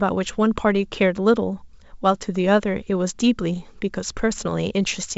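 No technical faults can be heard in this speech, which comes through a G.722 wideband telephone path at 64 kbit/s.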